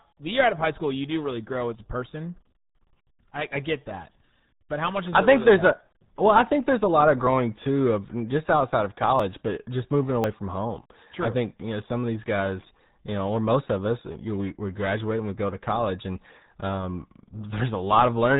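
Speech runs the full length through the RealAudio 14.4 codec, and the damage is heavy. The band stops at about 4 kHz, so sibilants and consonant detail are gone. The low-rate coder's coarse modelling of the vocal tract gives a muffled, gargly texture. That degree of smearing fits the 8 kbit/s RealAudio 1 format built for dial-up modems. On top of this are three short discontinuities, each a jump forward with no gap of silence. The first is at 7.27 s, between "there's a lot of" and "too of just outside", with roughly 20 ms missing. The second is at 9.20 s, after "of just outside of" and before "but just moving", with about 10 ms missing. The third is at 10.24 s, between "but just moving" and "from home", where around 40 ms is skipped. These are likely dropped buffers from an overrun: the capture side fell behind, the hardware overwrote unread samples, and the audio on either side was spliced directly.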